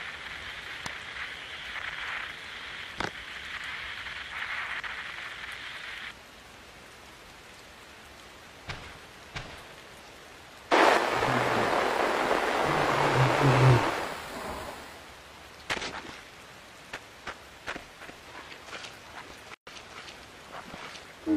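Separately encoded pieces were joined without trimming encoder delay and end padding, leaving a gap at a join of encoded pieces: a 127 ms gap from 19.54 to 19.67 s, with smeared edges.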